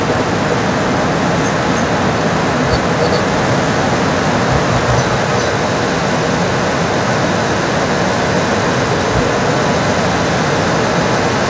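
Throughout the speech, a second copy of the voice comes back about 310 ms late at roughly equal loudness, an echo leak likely from a loudspeaker echo canceller letting it through.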